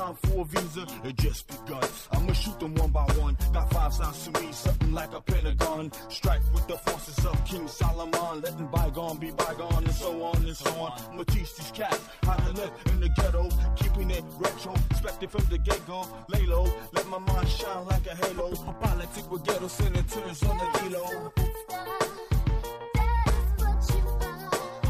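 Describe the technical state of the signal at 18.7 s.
At 18.7 s the signal is intact, with no dropout, distortion, glitch or other audible fault at that point.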